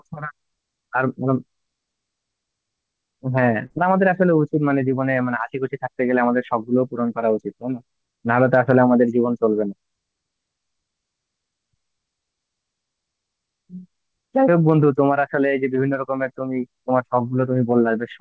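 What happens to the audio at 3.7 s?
From 3.66 to 3.72 s there is a short concealed packet loss: about 40 ms of audio arrived too late, so the decoder extended the preceding sound and blended back in. Unlike a dropout, nothing goes silent; it is a brief smear or wobble.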